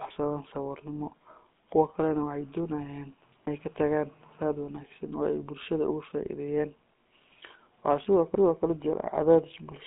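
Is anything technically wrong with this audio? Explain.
Yes, the speech throughout has the damage of a GSM full-rate codec. The excitation is rebuilt from regularly spaced pulses, which gives a gravelly, buzzy roughness. Nothing above about 3.7 kHz survives, which fits a 13 kbps GSM full-rate stream.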